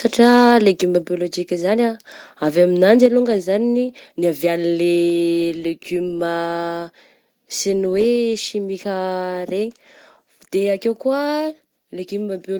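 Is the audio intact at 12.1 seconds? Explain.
Yes, at 12.1 seconds the speech runs through cleanly with no dropout, glitch or other audible fault.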